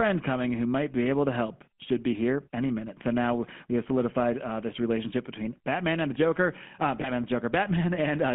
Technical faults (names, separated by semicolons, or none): GSM full-rate codec; lost GSM frames